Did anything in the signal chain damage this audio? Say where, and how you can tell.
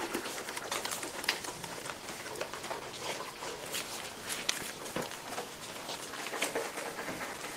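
No, nothing along the signal chain has audibly damaged this audio: the level, timing and continuity hold steady across the whole clip, with no stage leaving a mark on the sound.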